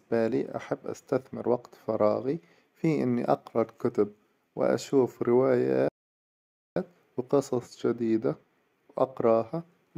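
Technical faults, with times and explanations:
5.88–6.76 s, playback stall: the speech halts mid-flow for about 0.88 s of dead silence, then carries on. This is likely the player running dry of buffered data or having its output thread blocked, so nothing reached the output until it recovered. On a waveform it shows as an abrupt flat line cutting into active signal; on a spectrogram, a clean vertical gap of empty bins across all frequencies, edged by hard onsets.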